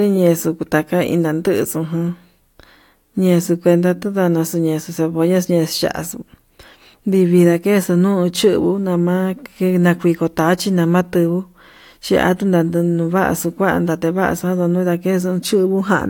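No technical faults can be heard at any point, so there is nothing to describe in time order.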